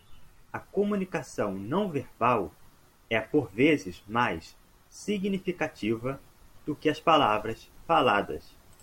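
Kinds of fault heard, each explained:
No technical faults are audible.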